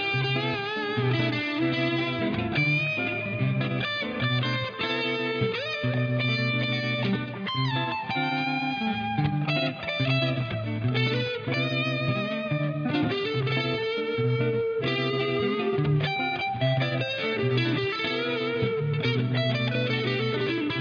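No technical faults can be heard anywhere in the recording; the signal stays intact and steady throughout.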